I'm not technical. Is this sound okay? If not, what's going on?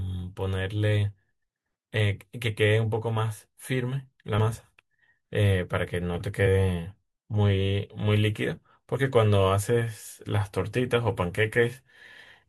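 No. At 6.45 s and 8.94–8.96 s, compressed frames are skipped: a couple of frames of the speech go missing, so it jumps ahead about a twentieth of a second.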